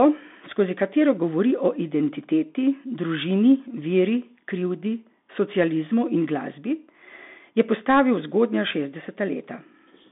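Throughout, the speech passes through a Bluetooth CVSD headset codec. The band is squeezed to about 200 Hz to 3.6 kHz, with a granular hiss underneath and scratchy s sounds. A clean telephone band-limit would have neither.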